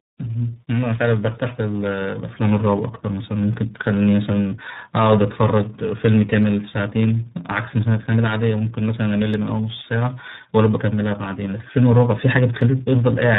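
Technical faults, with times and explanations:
Throughout: tandem speech coding. The speech passed through three speech codecs in a row, ending in iLBC, each recoding the previous one's damaged output. The errors stack up, so the voice sounds rough, muffled and warbly.
3.54 s, 6.43 s, 9.34 s and 12.61 s: dropped samples. At each point a tiny fraction of a millisecond is missing, so the waveform jumps abruptly. Each gap is far too short to remove sound. It is heard as one sharp click, likely from a glitch in the sample stream.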